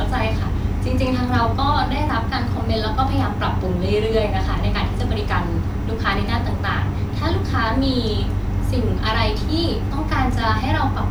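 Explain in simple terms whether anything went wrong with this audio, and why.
Nothing went wrong with this speech recording. At no point does the sound suggest a technical problem.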